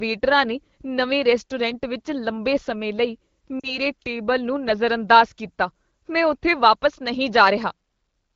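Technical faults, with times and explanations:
3.59 to 3.78 s, lost AMR speech frames: after "ਵਿੱਚ ਲੰਬੇ ਸਮੇਂ ਲਈ", about 40 ms of speech, consistent with two dropped frames, is rebuilt from the last good pitch and vocal-tract settings with falling gain, so it smears and dips before "ਟੇਬਲ ਨੂੰ ਨਜ਼ਰਅੰਦਾਜ਼ ਕੀਤਾ" returns over the AMR wideband link.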